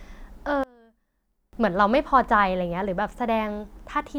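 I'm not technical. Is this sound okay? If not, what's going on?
No. From 0.64 to 1.53 s the speech suddenly drops to a faint trace. The likely cause is one channel inverted: one side's signal is flipped, so when both sides are combined into one, the shared sound cancels and nearly disappears.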